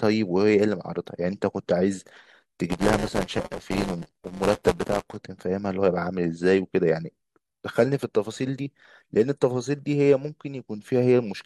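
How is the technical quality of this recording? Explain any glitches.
The recording has one clear fault, buffer tearing, from 2.69 to 5.16 s of the speech. During that stretch the writing and reading sides of the playback buffer have slipped so that they cross inside every period. Roughly a sixth of each block is stale audio from about 10 ms earlier, spliced in with hard joins. This produces a robotic 172 Hz buzz, which fits a 256-sample buffer. A waveform shows a step discontinuity at every block, and a spectrogram shows evenly spaced vertical striations.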